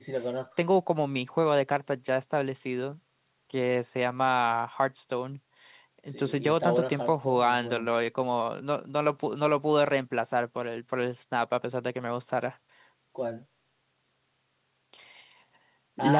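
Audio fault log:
Speech arrives over a call path whose content stops at 4 kHz, as G.711 A-law telephone coding would leave it, and no faults can be heard.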